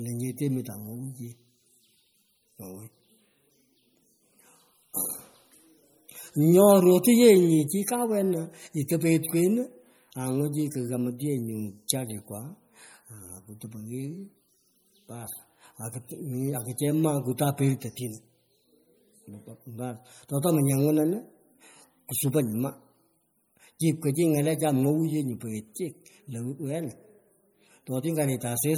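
Throughout the speech there is a watery, swirling texture with smeared consonants, most likely from MP3 compression. The damage is plainly audible and fits a low bitrate of about 48 kbps. Weak spectral detail flickers between frames, and nothing is present above 20.9 kHz.

At 8.88 s and again at 11.88 s, a brief hiss comes just ahead of a sharp attack, lasting 11 ms and 12 ms respectively. This is pre-echo: quantisation noise spread across the transform block leaks into the quiet instant before the onset and softens it.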